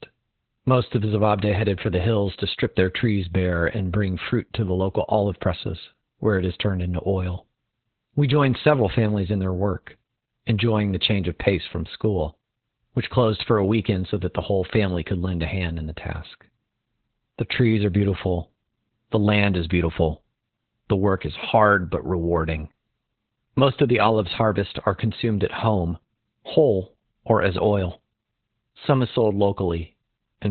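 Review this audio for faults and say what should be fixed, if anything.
Opus voice compression throughout: nothing above 4.2 kHz, and coarsely coded excitation makes speech hoarse and robotic, unlike a clean low-pass; this fits about 8 kbps narrowband SILK. Encode at a higher bitrate so Opus keeps wideband coding.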